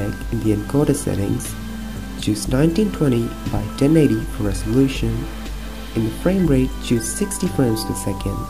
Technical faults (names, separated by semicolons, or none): low bit depth without dither